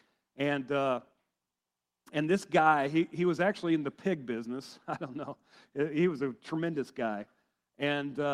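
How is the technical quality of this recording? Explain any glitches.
Nothing stood out on listening, so there are no glitches to explain in this recording.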